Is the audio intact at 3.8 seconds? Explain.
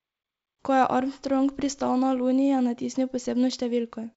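Yes, the audio is intact at 3.8 seconds, with no fault present at that moment.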